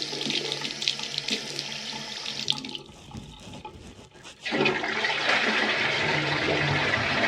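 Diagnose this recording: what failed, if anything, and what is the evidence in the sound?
No fault is audible here.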